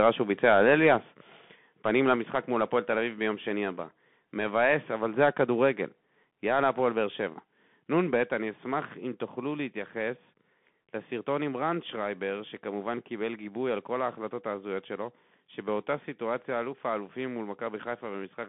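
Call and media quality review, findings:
Bluetooth CVSD headset codec, throughout: spectrogram empty above 3.8 kHz, energy confined to roughly 150 Hz–3.5 kHz; granular hiss floor, scratchy sibilants from slope overload on the adaptive one-bit delta stepping.

Microphone volume stepped down at 1.02 s, 2.16 s and 6.24 s: waveform envelope drops abruptly by about 3, 3 and 2 dB, noise floor included. Likely call software lowering device input gain.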